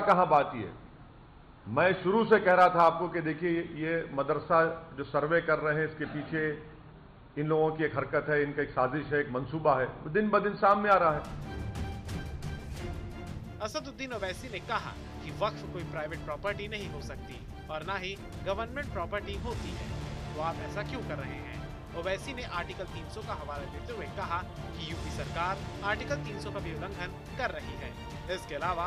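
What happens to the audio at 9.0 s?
Nothing goes wrong at 9.0 s; the audio plays through that moment intact, with no dropout, click, distortion or other fault.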